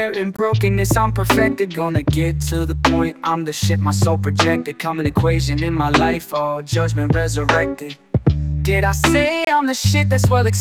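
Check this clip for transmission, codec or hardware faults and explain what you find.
Two brief silences fit a Bluetooth stall: 19 ms at 0.37 s, and 26 ms from 9.45 to 9.47 s. The sound resumes where it stopped, likely because delayed packets let the headphone buffer run dry. A loss gap would instead skip audio.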